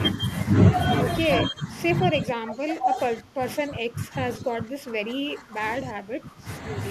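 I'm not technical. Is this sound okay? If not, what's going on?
No. The speech dips from 1.37 to 1.71 s, then drops much further from 1.92 to 5.62 s and from 5.78 to 6.47 s. This is speech suppressed in double talk. Both sides likely spoke at once, and the echo-cancelling system turned this speech down along with the echo.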